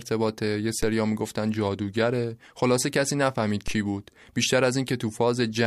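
The zero line of the waveform jumps by about -19 dBFS at 0.83 s and again at 3.68 s, then drains away through a 5 Hz high-pass. Each DC step lands as a low thump under the speech, which carries on undisturbed.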